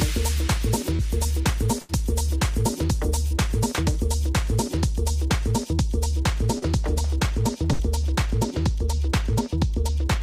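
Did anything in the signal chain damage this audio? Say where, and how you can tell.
Yes. The damage happened at the network stage. Short concealed packet loss shows up at 0.96 to 1.00 s, 3.28 to 3.32 s and 6.59 to 6.63 s. At each point, 20 to 30 ms of audio never arrived at the decoder in time. The receiver covered each gap with 24 to 32 ms of synthesised continuation, carrying on the preceding sound before blending back into the real signal. The result is a brief smear or wobble, and the sound continues with a small piece missing.

Two bursts of packet loss occur, at 1.81 to 1.90 s and 7.73 to 7.80 s. These gaps are longer: about 80 ms and then 60 ms of audio were lost or arrived too late to play. The concealment extends the last sound across 78 ms and 60 ms and fades it as it goes, so you hear a held buzz or a decaying hiss. The audio then resumes further along, and everything in between is gone.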